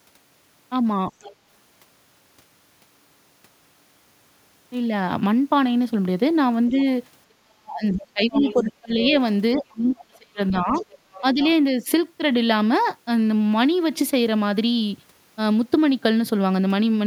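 Other side's voice leaking through at 1.21–1.35 s, 8.28–8.72 s, 9.05–9.11 s and 10.48–11.48 s: faint far-end speech sits about 10 to 20 dB below the talker, likely loudspeaker echo the canceller failed to remove.

Speech suppressed in double talk at 6.70–6.77 s, 7.40–9.15 s, 9.55–10.75 s and 11.21–11.40 s: the talker's level dips slightly at first, then drops by up to about 40 dB, likely because the echo canceller turned down both overlapping voices.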